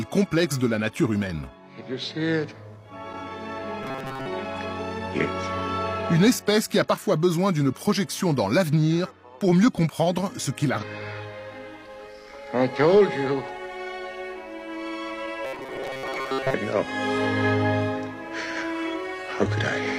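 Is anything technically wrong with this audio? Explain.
Yes, the clip has two kinds of fault.

From 3.83 to 4.26 s and again from 15.45 to 16.54 s there is robotic sound from repeated short buffers. New audio arrives too slowly, and playback fills the gap by looping a very short slice of the most recent audio. Most of the real material in those spans is skipped. The loop imposes a steady 133 Hz buzz, which fits a slice of about 7.5 ms. The sound turns hard and metallic while still roughly tracking its original shape. The likely cause is a starved playback buffer.

Between 10.78 and 10.84 s a stream segment is skipped. One segment of the segmented stream likely failed to load, and the player carried on with the next one. A chunk of the programme is missing, so the sound jumps forward abruptly, with a small blip at the join.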